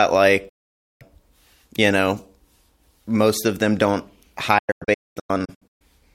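Digital broadcast dropout mutes the speech from 0.49 to 1.02 s with an 8 ms fade, then after "most of them don't" punches scattered holes from 4.58 to 5.82 s, longest 0.22 s, as corrupted frames were discarded. Spectrogram and waveform show sharp-edged blank gaps.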